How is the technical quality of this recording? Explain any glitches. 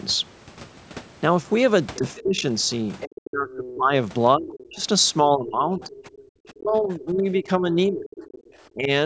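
The recording is a call with several echo-canceller faults. The audio passes through normal call microphone processing, with nothing above 8 kHz.

Speech suppressed in double talk, 1.98 to 8.9 s: the canceller likely mistook overlapping talk for echo and turned everything down. The voice dips by as much as about 25 dB, for about three seconds in total.

Other side's voice leaking through, 2.16 to 4.68 s and 5.83 to 8.41 s: residual loudspeaker echo likely escaped cancellation. A faint second voice sits roughly 20 dB, then 25 dB, below the speech.

Background gated by the echo canceller, 6.19 to 6.3 s: the canceller clamped the microphone, likely while the loudspeaker played. Room sound drops by about 21 dB for that instant, then returns.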